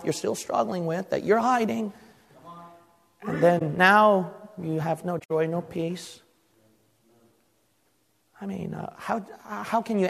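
At 3.58 s a brief concealed stretch lasts about 36 ms, and at 5.19 s a longer one runs to 5.31 s, roughly 126 ms, which fits several consecutive damaged AAC frames. Both are corrupt frames concealed by the decoder: it detected bad bits and filled the gap with muted or scrambled spectral content.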